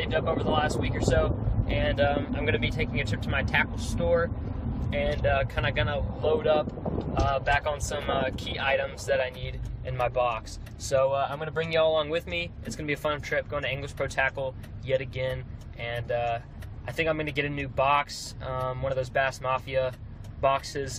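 Nothing is technically wrong with the clip; no faults can be heard at any point.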